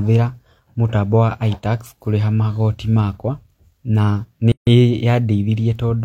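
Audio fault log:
4.52–4.67 s, gap at a join of encoded pieces: a silence of about 150 ms cuts into the continuous speech with smeared edges, then the speech resumes where it stopped. Two separately encoded pieces were joined untrimmed, leaving the encoder's start delay and last-frame padding in place.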